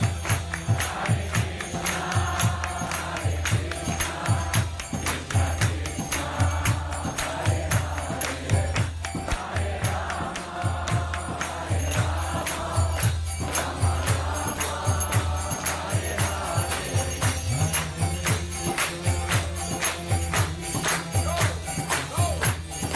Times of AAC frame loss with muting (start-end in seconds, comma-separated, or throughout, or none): none